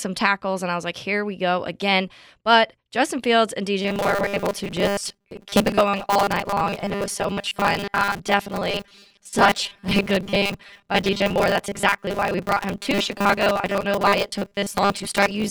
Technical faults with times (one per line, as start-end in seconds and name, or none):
3.82-15.51 robotic sound from repeated short buffers